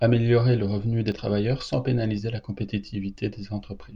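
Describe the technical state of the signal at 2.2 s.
At 2.18 s, right after "revenu des travailleurs sans", there is a small jump forward in the speech. The likely cause is a dropped buffer (overrun): the samples were overwritten before they were read, so roughly 20 ms went missing and the audio on either side was butted together. Unlike a dropout, no silent gap is heard. The sound simply skips ahead with no pause.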